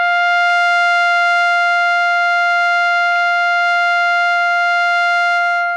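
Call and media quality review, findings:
DAB burbling in the music at 0.46–0.51 s and 3.10–3.24 s: short noise blips in single sub-bands. Weak reception is letting bit errors past error correction into the MP2 data.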